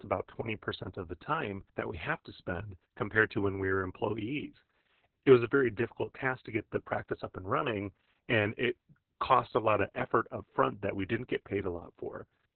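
Speech with Opus voice compression throughout: the band stops near 4 kHz, and the coarsely coded excitation leaves the voice muffled, hoarse and slightly robotic. The heavy damage points to the SILK coder in narrowband mode at a very low bitrate, around 6 kbps.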